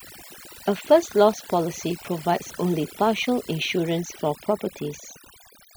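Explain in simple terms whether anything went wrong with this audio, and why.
A noise reduction tool was pushed too hard, which is overdone noise removal. Throughout, it shuts off whole slices of the sound whenever they resemble background noise, so the background drops and breaks up into twinkling, warbling specks.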